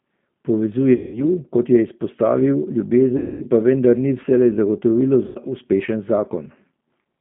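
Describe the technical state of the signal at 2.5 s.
At 2.5 s the speech is running through the G.729 codec, as it does for the whole clip. It's rebuilt from a vocal tract model plus sparse pulses, which fits an 8 kbit/s stream. The band is squeezed to roughly 150 Hz to 3.5 kHz, and it sounds plainly rough and synthetic.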